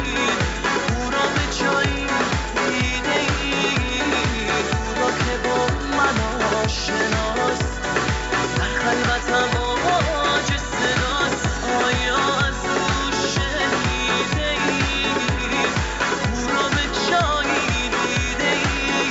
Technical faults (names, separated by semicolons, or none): none